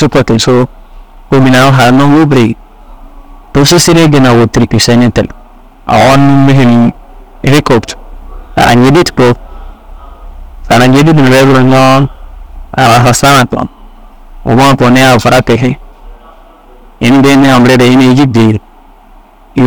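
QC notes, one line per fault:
throughout: hard clipping, overdriven about 23 dB so nearly a third of samples are cut flat; harsh fuzz, squared waveform plateaus, high-frequency spectrogram smear.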